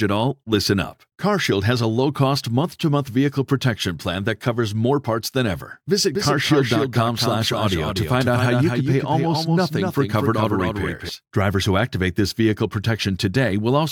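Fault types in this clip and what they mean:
Doubled audio track: the same speech is most likely being mixed in twice, with a second capture path or an edit carrying a copy that lags behind the original. From 6.15 s to 11.09 s a full-band duplicate trails the speech by roughly a fifth of a second, only about 5 dB quieter, so every syllable is followed by a dry, distinct repeat with no reverberant tail. The copy cuts in and drops out abruptly at those points.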